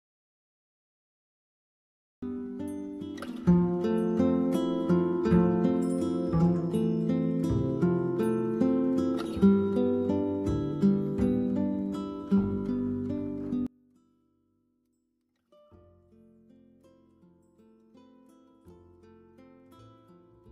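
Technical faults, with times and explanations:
0.00–2.23 s, audio dropout to silence: the clip opens already silent, with no room tone, likely from a lost input; the waveform is flat and the spectrogram empty.
13.67–20.52 s, one channel inverted: level falls by about 31 dB to the end, likely from reversed polarity cancelling shared content in mono; waveform shrinks sharply, spectrogram fades.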